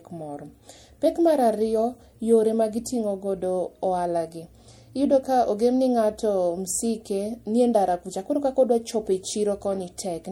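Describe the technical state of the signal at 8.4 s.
At 8.4 s the speech is going through what is likely MP3 compression, present across the whole clip rather than just at this moment, and the damage fits a low bitrate of around 64 kbps. The encoder lacks the bits to code every frequency line, so it drops weak ones that then flicker on and off between frames. The result is a plainly audible watery, swirling texture with smeared consonant onsets, and no content above 20.5 kHz.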